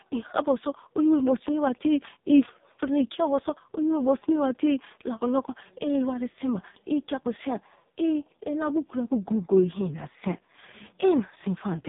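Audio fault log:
throughout – AMR narrowband mobile codec: the speech is cut off above 3.8 kHz and sounds heavily buzzy and synthetic. The codec rebuilds each 20 ms frame from a vocal-tract model driven by sparse pulses. Damage this severe fits its lowest 4.75 kbps mode.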